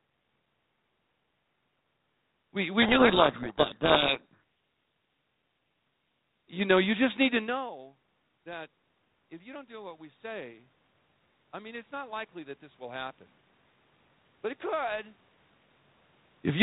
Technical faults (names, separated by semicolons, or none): codec payload misread; automatic gain rising